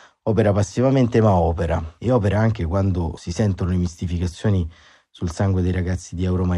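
No technical faults are audible.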